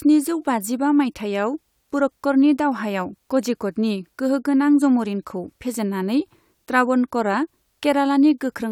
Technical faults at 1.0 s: none

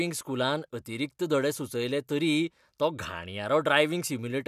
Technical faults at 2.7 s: none

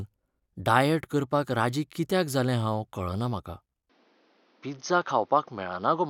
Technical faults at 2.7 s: none

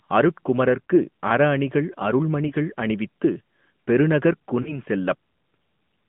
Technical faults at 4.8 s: AMR narrowband mobile codec; lost AMR speech frames

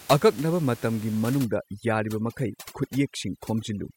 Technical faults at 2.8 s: overdone noise removal

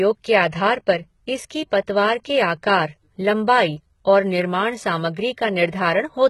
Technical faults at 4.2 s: HE-AAC compression

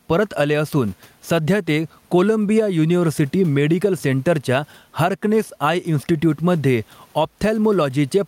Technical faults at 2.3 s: gain pumping

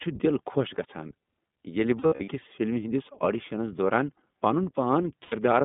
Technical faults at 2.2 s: iLBC codec; lost iLBC frames

